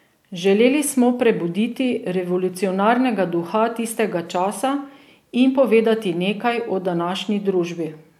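Nothing in this speech recording stands out as a technical fault at any point, so there's nothing to flag here.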